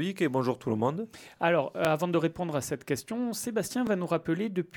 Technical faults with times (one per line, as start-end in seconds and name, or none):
1.85-1.87 overlapping chunks
3.87-3.89 overlapping chunks